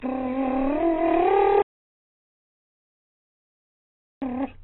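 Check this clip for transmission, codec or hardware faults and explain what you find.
Two faults are present in the music: heavy codec damage throughout and a long dropout to silence.

AAC compression runs through the whole clip. Nothing is heard above 3.9 kHz, and the band is dull and smeared, with a fizzy warble. This points to AAC-LC at roughly 9 kbps, which likely forced a very low cut-off. Unlike a simple low-pass filter, it leaves a watery, unstable texture.

An audio dropout to silence runs from 1.62 s to 4.22 s, about 2.6 s, likely because the input was lost. The sound stops abruptly. It is silence with no room tone, which separates it from a quiet passage.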